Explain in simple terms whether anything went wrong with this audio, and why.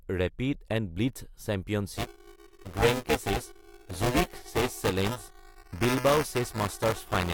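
Something goes wrong at 1.97 s and stays wrong until the speech ends. From that point the speech picks up a steady robotic buzz, like a rattle, at about 375 times per second. This is buffer tearing. The program filling the audio buffer and the sound hardware reading it have fallen out of step. In each small chunk, roughly a third of the sound is stale, about 10 ms old. The hard joins repeat at a rate that fits a 128-sample buffer.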